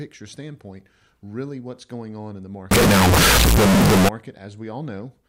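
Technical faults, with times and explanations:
2.71 to 4.09 s, float read as integer: after "going on in the", the speech turns near-square, loud and harsh, with noise as loud as speech. Likely cause: 32-bit float samples read as 32-bit integers.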